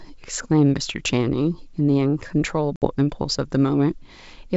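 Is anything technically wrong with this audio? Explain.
Yes. From 2.76 to 2.86 s the speech cuts to a hard-edged silent hole of 60 ms, then resumes slightly distorted before settling. This is packet loss on an ADPCM call: about three packets vanished, knocking the decoder's adaptive predictor and step size out of step with the sender's until they resettled.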